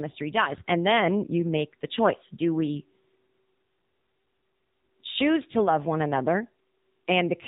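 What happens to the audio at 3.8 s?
At 3.8 s, as through the whole clip, the speech runs through an AMR narrowband mobile codec at a low rate, consistent with about 7.4 kbps. Everything above 4 kHz is gone, and the vocal-tract model, fed only sparse pulses, leaves the voice thin, buzzy and plainly synthetic.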